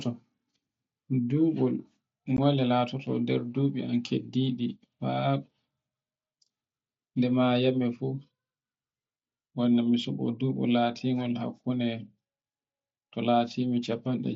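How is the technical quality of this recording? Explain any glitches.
A single glitch mars the recording, an instance of unconcealed Bluetooth headset packet loss at about 2.37 s. The audio is carried over the wideband mSBC headset codec.

At 2.37 s, voice packets travelling between headset and phone failed to arrive, and nothing was done to hide the gap. Roughly 15 ms of silence or an idle pattern replaces the speech, which fits a couple of lost codec frames, leaving a brief hole with sudden edges.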